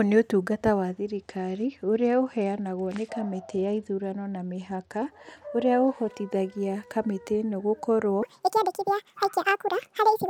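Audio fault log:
1.15–5.06 s, Bluetooth SBC bit pool drop: the speech turns dull and gritty as the top sub-bands lose their bits and the rest get coarsely quantised. That fits the link falling from a bit pool of 28 to 11, around 90 kbps, before recovering.
8.23–10.30 s, section at the wrong speed: the speech runs 1.81 times too fast to the end of the clip, with pitch jumping up by close to ten semitones, so it sounds high and rushed. Likely a player or editor clocking that stretch wrongly.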